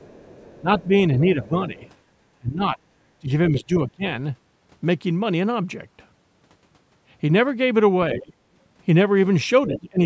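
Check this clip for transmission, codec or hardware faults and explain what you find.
Two related echo-cancellation faults run through this speech clip, both clustered where the two sides of the call overlap.

The other side's voice leaks through from 0.0 to 1.9 s, 8.12 to 8.2 s and 9.67 to 9.89 s. The likely cause is that the talker's device played the far end on a loudspeaker and the echo canceller left a residue of it in the microphone signal. At the start the second voice sits faint in the background, roughly 30 dB under the talker. In the two later bursts it comes up much closer, around 15 dB down, as short scraps.

The talker's speech is suppressed during double talk from 0.61 to 1.8 s, 2.38 to 4.05 s, 8.15 to 8.34 s and 9.67 to 9.99 s. While both sides spoke together, the canceller likely could not tell its own talker apart from the loudspeaker echo and turned everything down. The voice dips in pieces, by about 10 dB in the first stretch and about 25 dB in the second. 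The dips total roughly half a second and under a second in those two stretches, and the two short late ones drop by about 15 and 20 dB.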